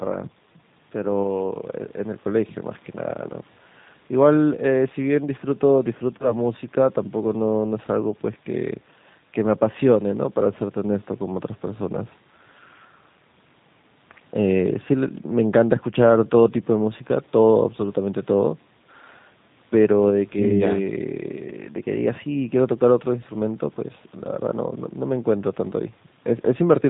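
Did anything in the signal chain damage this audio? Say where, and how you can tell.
Yes. At the codec stage, G.729 at 8 kbit/s makes the speech rough and synthetic throughout; a spectrogram shows nothing above 4 kHz.

At the network stage, VoIP packet loss concealed by the speech codec hits from 6.18 to 6.34 s. About 20 ms is missing, consistent with a single lost packet. The decoder stretches the last sound into a buzzy tone or a coloured noise that fades, visible as smeared, decaying energy, and the speech stays weak or distorted for a while afterward.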